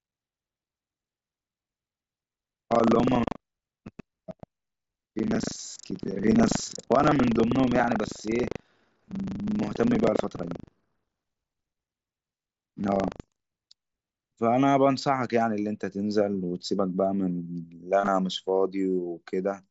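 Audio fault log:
0.0–13.8 s, buffer tearing: the writer and reader of the playback ring buffer have slipped and cross every 40 ms, so a small slice of each buffer replays audio from about a tenth of a second earlier. This produces a steady 25 Hz rattle during sound. A spectrogram shows vertical broadband ticks every 40 ms, and the waveform shows hard splices.
10.11 s and 18.00–18.07 s, concealed Bluetooth headset packet loss: headset packets were dropped, 15 ms at the first point and 45 ms scattered across 75 ms at the second, with runs up to 22.5 ms. The receiver filled each gap by repeating recent waveform. The first is nearly hidden. The second gives a brief buzzy held tone, which appears on a spectrogram as flat repeated harmonics at full level.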